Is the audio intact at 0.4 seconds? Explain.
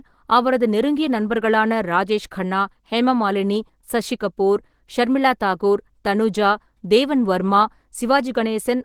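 No. At 0.4 s, as throughout, the speech carries Opus compression damage, likely from a low bitrate around 16 kbps in the hybrid speech mode. Bands are refilled with noise rather than left empty, so it sounds hoarse and grainy instead of MP3-style swirling.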